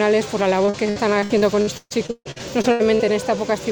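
From 0.65 s to 3.01 s the sound breaks up with repeated packet loss, heard as a robotic sound. Packets keep arriving too late or not at all. Each hole is bridged by stretching out the sound just before it, and the next dropout comes soon after. Across the stretch there are many short gaps, the longest about 150 ms, and roughly a third of the span is concealed. The result is choppy audio with pieces missing.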